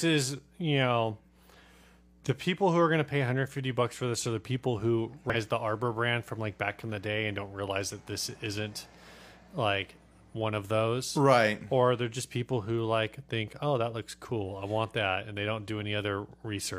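Damaged data in a compressed stream appears from 5.30 to 5.36 s, a burst of about 60 ms in the speech. At that point the coded frames no longer match what the decoder expects, so it misreads them, loses its place in the stream and must hunt forward for the next valid frame header before normal decoding resumes. The result is a short glitch in the speech.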